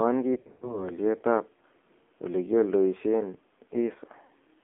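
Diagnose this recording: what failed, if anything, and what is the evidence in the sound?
AMR narrowband mobile codec, throughout the clip. This is a codec-stage fault. The speech sits in a telephone band of roughly 250 Hz to 3.5 kHz, with nothing above it. The voice is plainly buzzy and synthetic, as a vocal-tract model rebuilds it from a few pulses per subframe. The degree of damage points to a low AMR-NB mode, around 7.4 kbps, where too few bits remain to capture natural timbre.

Lost AMR speech frames, from 0.34 to 0.91 s and again at 4.26 to 4.32 s. This failure is in the network stage. In the first stretch, about 200 ms of audio goes missing across roughly 280 ms in scattered gaps. The longest gap is about 100 ms, where the sound smears and sags as the decoder repeats its last good pitch and filter settings at falling gain. The later dip lasts about 40 ms, consistent with two lost 20 ms frames concealed the same way.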